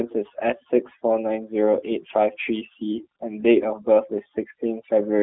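Throughout the speech, overdone noise removal pulls the background down in the gaps between phrases, breaking it up into isolated twinkling specks. Its noise estimate was set too aggressively, so weaker parts of the voice are cut along with the noise. Unlike a gate, it removes individual frequency bands rather than the whole signal.

The G.729 codec damage is also present throughout and plainly audible. Its 8 kbit/s model rebuilds the voice from a vocal tract filter and sparse pulses, which gives it a rough, slightly synthetic buzz. Nothing reaches above 3.4 kHz or much below 250 Hz. Simple band-limiting would sound muffled but stay smooth, without that synthetic graininess.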